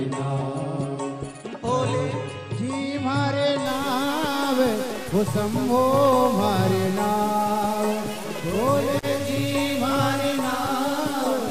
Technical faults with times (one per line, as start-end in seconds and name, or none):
3.66-11.51 stuck bit